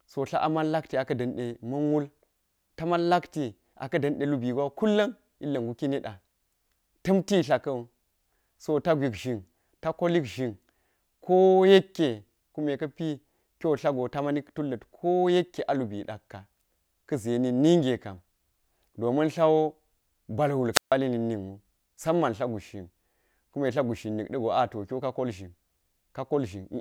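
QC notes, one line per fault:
20.73–20.93 s, wireless microphone squelch dropout. Hiss rises briefly, then the speech drops to near silence for about 145 ms before returning. The radio link from the microphone faded, and the receiver's squelch muted its output until the signal recovered.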